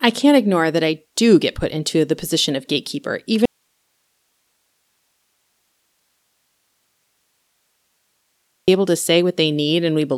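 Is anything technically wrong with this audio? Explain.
Yes, there is an audio dropout to a faint residue. Right after "the position of gatekeeper", at 3.46 s, the speech cuts off abruptly and only a low hiss remains, roughly 50 dB below the speech level, until it snaps back at 8.68 s with "able to". That is about 5.2 s of lost signal. The likely cause is a break upstream while the later stages stayed live, passing their own noise through the gap.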